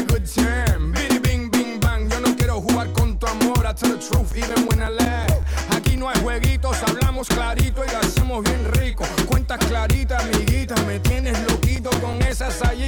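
CD scratch ticks from 3.75 to 6.16 s and 11.39 to 12.5 s: about six ticks a second, once per disc revolution, where unrecoverable data is muted or interpolated. They show as thin vertical spectrogram lines and waveform notches up to roughly ten milliseconds.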